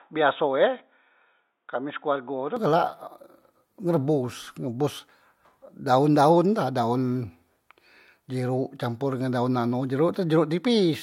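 From the start to 2.57 s, the input was likely switched to a poorer device, a different microphone or headset path that passes a narrower band. Speech in that stretch has nothing above 3.8 kHz, so it sounds dull and boxy. It sits around 5 dB quieter and carries a faint new background noise far below the voice. At 2.57 s the full band and level return abruptly, with no silence at the switch.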